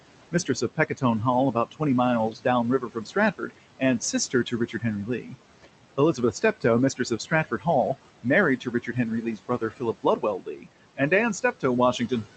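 Noise suppressor artifacts run through the whole clip. The suppressor pulls down bands it judges to be steady noise, here by about 18 dB. The room noise, sitting about 15 dB below the speech, sinks in the gaps and rises under words.

From 0.32 s to the end, there is speech cut by the noise suppressor. It mistakes parts of the speech for noise and turns them down with the background, by up to about 18 dB. Soft consonants and word endings sound swallowed and faint. The top end stops near 8 kHz, which fits a wideband call codec.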